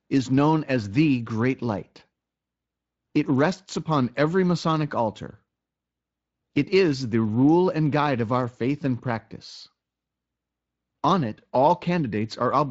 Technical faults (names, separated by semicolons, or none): none